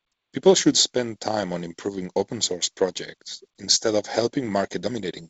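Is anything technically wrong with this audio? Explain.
No, nothing technically wrong stood out on listening to this speech clip.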